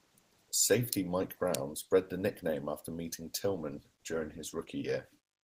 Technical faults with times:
0.50-5.43 one channel inverted
3.54-4.83 call bitrate drop

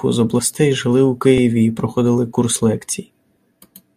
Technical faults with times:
1.38 overlap between stream segments
2.37 overlap between stream segments

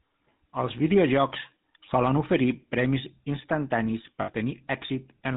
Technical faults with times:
0.00-5.36 GSM full-rate codec
4.22-4.29 lost GSM frames

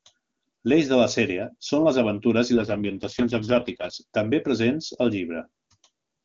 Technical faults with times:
2.54-3.94 AMR rate drop

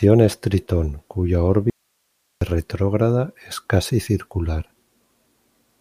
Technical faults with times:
1.70-2.41 audio dropout to a faint residue

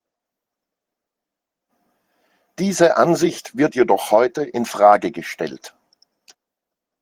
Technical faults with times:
none

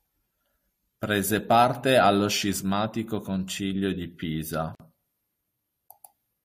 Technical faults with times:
4.75-4.80 gap at a join of encoded pieces

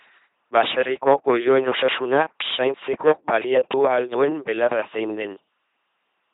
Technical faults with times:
0.00-6.34 LPC-10 vocoder

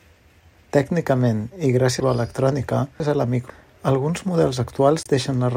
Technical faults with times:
2.00-3.50 chunks out of order
3.50 damaged data in a compressed stream
5.03-5.07 damaged data in a compressed stream

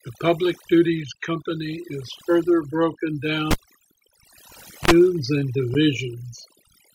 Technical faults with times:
0.00-6.95 overdone noise removal
3.51-4.91 cable pulled and plugged in

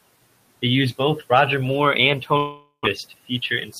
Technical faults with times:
2.37-2.87 long network dropout
3.66-3.76 speech cut by the noise suppressor

